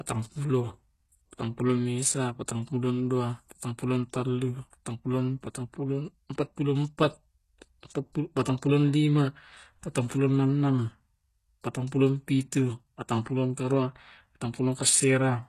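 Across the whole clip the speech shows plainly audible codec damage, likely from HE-AAC compression at a rate that fits about 16 kbps. The treble is rebuilt from copied lower bands rather than coded, so s sounds turn gritty and lispy, and nothing sounds above 12.3 kHz.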